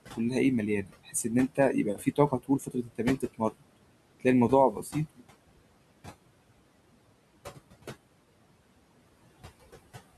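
Speech, with noise suppressor artifacts throughout: a frame-by-frame suppressor pulls the room noise down by about 21 dB between phrases, and the noise rises again under the speech. Speech cut by the noise suppressor occurs at 0.82–1.27 s, 1.48–3.01 s, 3.17–3.64 s and 4.72–4.95 s, with soft parts mistaken for noise and dipped by about 17, 18, 22 and 8 dB, so they sound swallowed. The room noise sits about 17 dB below the speech.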